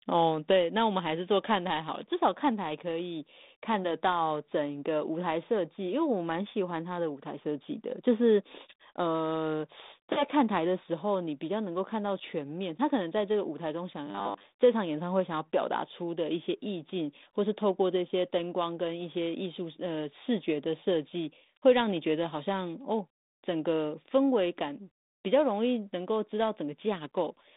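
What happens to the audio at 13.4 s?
Nothing goes wrong at 13.4 s; the speech carries on intact there, still coming through the narrow telephone-band G.726 ADPCM channel at 32 kbit/s with nothing above about 3.8 kHz.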